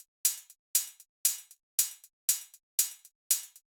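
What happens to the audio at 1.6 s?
Between 1.56 and 1.62 s there is a short stall from a late packet. A packet arrived after its due time, the jitter buffer ran dry, and the receiver stretched the preceding sound by about 28 ms to bridge the gap. Playback then resumed where it had stopped, so nothing is lost, but everything after is 28 ms later. The sound hangs slightly with a faint buzz or dip. A spectrogram shows frozen, smeared harmonics there, and the waveform repeats one cycle shape.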